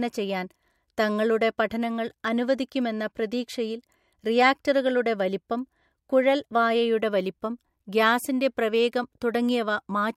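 No technical faults are audible anywhere in the recording.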